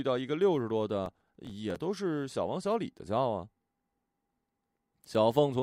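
From 1.06 to 1.76 s the speech breaks into processor overload crackle. The processor keeps missing its deadlines for very short buffers of around 3 ms. Each miss drops a gap of silence with hard edges into the signal, and around twenty of these strung together sound like a gritty tearing over the sound. On a waveform the span is peppered with tiny flat-line notches. On a spectrogram it shows thin vertical broadband streaks that stop when the load eases.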